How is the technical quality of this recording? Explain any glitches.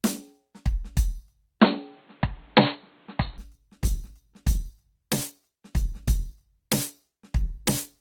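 The recording has two distinct quality problems, one after the other.

From 1.60 s to 3.38 s the music suddenly turns dull and boxy, with nothing above 4.3 kHz. A new layer of background noise, roughly 35 dB below the music, comes in, and the level shifts by around 5 dB. There is no silence at either edge. This is likely an input switched to a poorer device, such as another microphone or a headset's call profile, with its own narrow band, tone, gain and noise floor.

From 3.53 s to the end, the music stays full-range, reaching about 20.2 kHz, but sounds grainier. The change is abrupt and has no gap. This is an adaptive stream at a lower bitrate. A slowed connection made the player switch to a cheaper encoding, which fits a drop from about 64 to 16 kbit/s Opus. At that rate the codec has too few bits to code fine detail faithfully.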